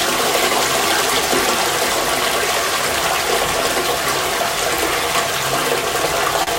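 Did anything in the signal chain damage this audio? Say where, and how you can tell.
Yes. A short stall from a late packet hits the network stage at 6.43 to 6.50 s. The sound hangs for about 35 ms. Nothing is skipped afterward. The jitter buffer ran dry, stretched the last audio, then resumed 35 ms later.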